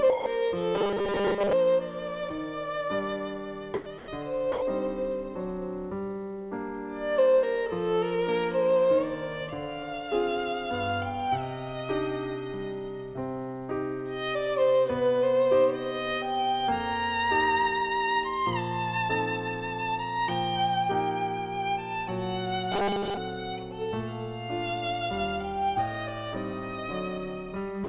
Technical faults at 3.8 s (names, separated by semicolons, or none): sound dropped by the voice detector